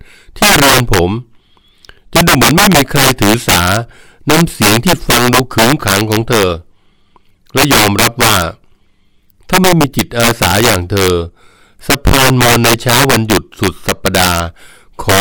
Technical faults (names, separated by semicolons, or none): integer overflow